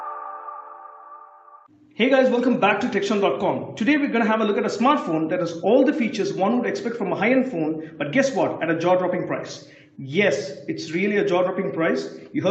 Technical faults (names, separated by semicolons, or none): none